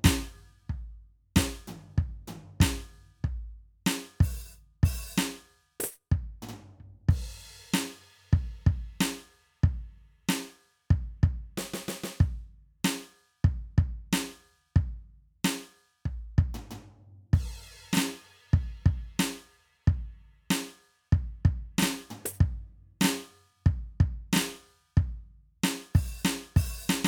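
No technical faults are audible in the music.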